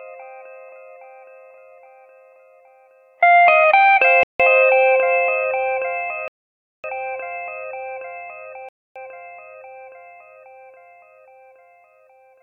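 At 4.23, 6.28 and 8.69 s the sound drops to silence for 164, 560 and 270 ms, then resumes. These are likely Bluetooth stalls, where delayed packets emptied the playback buffer.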